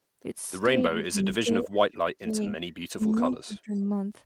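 The speech keeps sinking while the far end talks over it, which is most likely speech suppressed in double talk: the echo canceller can't tell this talker from the loudspeaker echo, so it turns everything down. From 0.79 to 1.19 s the level drops by about 15 dB, over roughly a third of a second. From 1.42 to 2.39 s it's worse, down about 25 dB at its deepest, over roughly 0.7 s of that stretch. Then there's a short bite at 2.95 s where the level falls about 30 dB.

From 3.11 to 3.37 s you hear an echo leak. A copy of the voice comes back 217 ms late, about 15 dB under the speech, likely because the loudspeaker side's canceller didn't scrub its own mic pickup. Right after that, from 3.46 to 3.72 s, the speech is suppressed again, down about 20 dB. A faint second scrap of the echo, about 35 dB down and with the same 217 ms delay, slips through at 3.74 to 3.80 s.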